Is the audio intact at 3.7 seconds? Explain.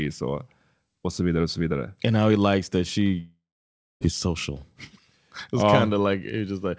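No. A long network dropout likely stopped packets arriving from 3.20 to 4.04 s, after "he likes that she". Concealment stretches the last sound into a fading buzz, then silence, and the lost stretch never returns.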